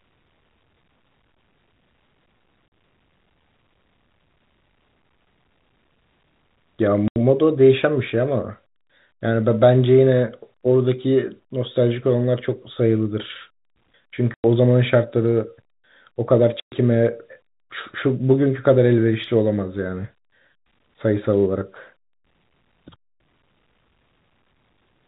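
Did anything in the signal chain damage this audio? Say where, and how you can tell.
Yes, at the network stage: packet loss filled with silence. The speech drops out abruptly at 2.68 s for 40 ms, 7.08 s for 80 ms, 14.34 s for 100 ms and 16.6 s for 120 ms, each hole with hard edges. The lengths all fit 20 ms packets, and the receiver substituted silence. The G.711 narrowband telephone coding itself adds no audible damage.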